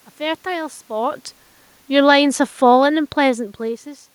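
From 1.9 s to 3.48 s the automatic gain falls: the gain control lowers its gain gradually by about 3 dB, so the speech and the room noise beneath it sink together, unlike the talker's own level shifts near 1 s and 3.5 s.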